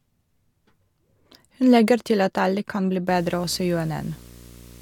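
Speech, with video or display buzz from 3.08 s, just after "at alle kan bli", running to the end of the clip. A 60 Hz field-rate buzz with hash above it sits roughly 25 dB under the voice, the sign of a display or video cable coupling interference into the audio path.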